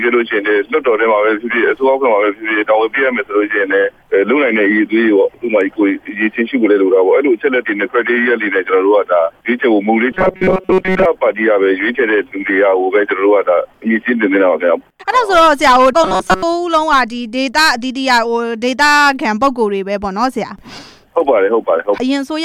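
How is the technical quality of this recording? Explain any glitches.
The recording has two glitches of the same kind, robotic sound from repeated short buffers, at 10.12 to 11.05 s and 16.04 to 16.43 s. In both, the sound turns into a rigid metallic buzz pinned at 188 Hz. The likely cause is audio arriving too slowly, so a fragment of about 5.3 ms is looped in place of most of the real signal. Unlike a dropout, there is no silence, and the buzz holds a fixed pitch.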